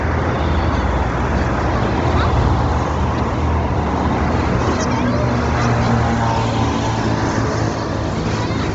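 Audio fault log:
Throughout: Bluetooth LC3 compression is the likely cause of the damage heard across the whole clip. Nothing is present above 7.8 kHz. The upper band is thin and grainy, with a breathy, hissy edge. The damage is heavy. At low bitrates this transform codec discards much of the high spectrum and fills the gaps with noise. The roughness fits a low bitrate near 24 kbps with short 7.5 ms frames.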